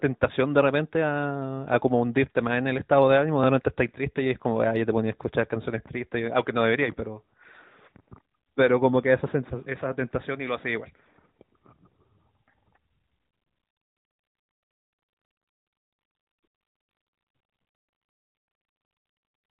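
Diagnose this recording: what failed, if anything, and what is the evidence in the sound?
Nothing failed here; it's speech coming through a mobile call chain working as designed, with no stage going wrong anywhere along the way.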